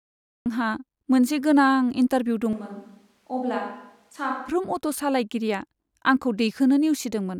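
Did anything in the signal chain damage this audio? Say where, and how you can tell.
Yes. Cut-off start at the storage or capture stage: digital silence until 0.46 s, then speech begins mid-sound. The waveform shows a flat silent line ending in an abrupt, attack-less onset.

Switch to a distant microphone from 2.53 to 4.49 s, likely a failed close-mic feed. Speech drops about 10 dB, turns roomy, and the spectrogram shows thinner lows, reverberant smearing, and noise about 35 dB down.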